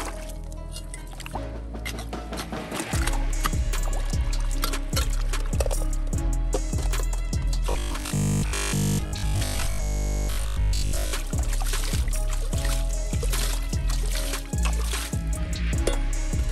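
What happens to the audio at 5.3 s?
Nothing goes wrong at 5.3 s; the audio plays through that moment intact, with no dropout, click or other disturbance.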